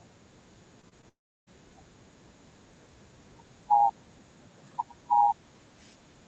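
At 0.81, 0.89 and 1.01 s, short concealed packet loss leaves brief smears where about 20 ms of speech went missing. The gaps were filled by extrapolating the preceding sound, which shows as blurred, repeated harmonic streaks on a spectrogram.

From 1.09 to 1.49 s, a brief fading buzz gives way to about 330 ms of flat near-silence, likely a long network dropout. The waveform flatlines and the spectrogram shows an empty band, with energy stopping above 8 kHz throughout.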